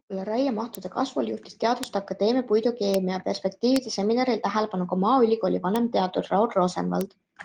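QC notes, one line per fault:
0.75, 1.84, 2.94, 3.76, 5.76 and 7.01 s: bit error spikes, brief sharp broadband ticks, each a flipped bit throwing one to three samples off by a power of two.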